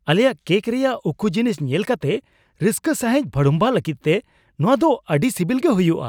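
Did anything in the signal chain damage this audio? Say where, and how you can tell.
No, there's nothing in this speech recording that points to damage anywhere along the chain, so there's no stage to single out.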